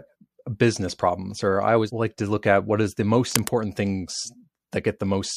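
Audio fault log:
3.31–3.54 s: cable scratch noise. Just after "at what is the", a dense, ragged burst of scratching sits over the speech for about a quarter of a second. It is loud, only about 5 dB below the speech. The bursts are uneven, not a steady hiss. This fits a worn cable, connector or control being moved. Its contact resistance likely jumped about rapidly, and each jump added a spike of noise to the signal.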